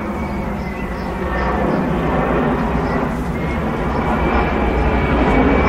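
At 1.69 s, compressed frames skipped: several whole frames never reached playback, so the sound jumps forward by roughly 150 ms. The waveform shows an abrupt content change.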